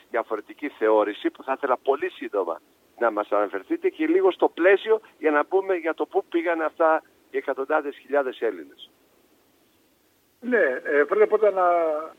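No audible technical faults anywhere in the recording.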